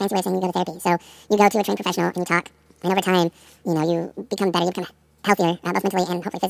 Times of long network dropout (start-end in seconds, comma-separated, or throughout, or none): none